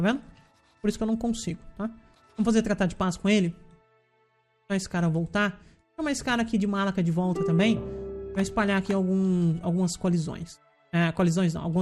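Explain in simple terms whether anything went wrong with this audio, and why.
The sound is dull and muffled from start to finish, with a gurgling, grainy roughness underneath it, the kind familiar from weak digital radio. This points to MP2 compression as the likely cause. That format splits the audio into many narrow frequency slices and shares out a limited budget of data between them. Here the budget was too small, so the highest slices were switched off and flickered in and out, and the rest were stored too crudely.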